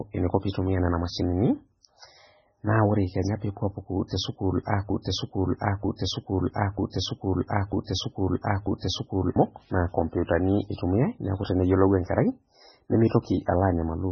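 Throughout the clip the speech carries heavy MP3 compression artefacts, likely from very low-bitrate encoding, which fits a bitrate of around 16 kbps. Nothing is present above 6.4 kHz, where the encoder has cut the treble. Below that, bits are too scarce, so weak frequency lines are zeroed and switch on and off from frame to frame. The result is a watery, swirly texture, metallic chirping on s sounds and smeared attacks.

From 4.9 s to 9.36 s a broken-record loop takes over. A fragment of about 0.94 s repeats exactly and back to back, five times. The likely cause is a stalled player, encoder or stream that kept resending the last fragment it held. Whatever audio should have played during those seconds is lost. Normal playback resumes only at 9.36 s.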